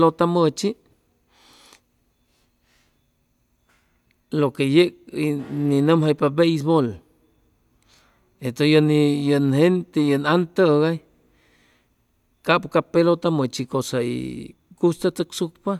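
Listening through this speech recording, nothing stood out as a technical problem.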